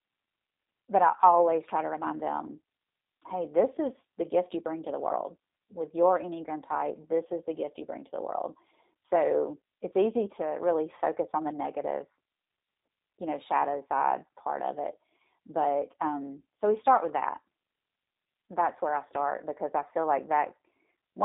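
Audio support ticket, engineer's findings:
Speech thin, boxy and slightly buzzy-synthetic throughout the clip; codec damage plainly audible. Band limited to roughly 250 Hz to 3.7 kHz, nothing above 3.8 kHz. Probable component: G.729 codec (G.729A) on the voice path, consistent with an 8 kbit/s stream. Mechanism: speech is rebuilt from a vocal-tract filter, pitch predictor and sparse pulses per 10 ms frame rather than waveform-coded, which gives the rough, artificial texture.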